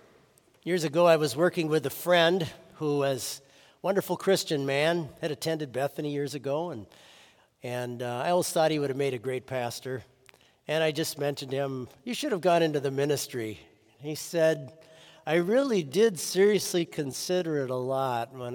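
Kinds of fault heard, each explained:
Time-stretched section: from 13.55 s to the end of the clip the pace abruptly slows to 0.74 times normal speed while the pitch stays put, so the sound drags. This is likely software lengthening the passage by repeating short slices of audio to preserve pitch.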